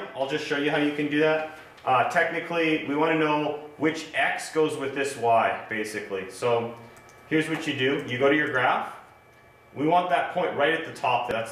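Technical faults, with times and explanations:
11.31 s, damaged data in a compressed stream: a brief glitch cuts into the sound near the end. Bytes in the compressed stream were corrupted there. The decoder misreads that frame and loses sync. It outputs garbage until it finds the next frame header.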